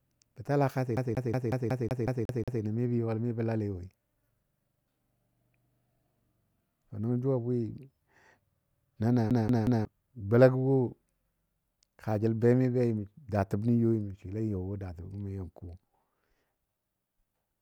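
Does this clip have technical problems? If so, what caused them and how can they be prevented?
Yes. The speech has a CD stuck on one turn, twice. From 0.97 to 2.62 s a 0.18 s slice plays nine times, and from 9.30 to 9.85 s, just before "golagɔ wo", the same-length slice repeats three times. A scratch keeps throwing the laser back one track, with a brief mute at each jump. A waveform shows identical blocks separated by thin gaps, and a spectrogram shows an evenly repeating pattern. Cleaning or replacing the disc, or ripping it with an error-correcting drive, prevents this.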